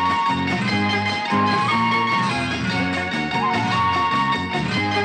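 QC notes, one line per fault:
Nothing here to flag; I listened closely and didn't hear any technical problems worth noting.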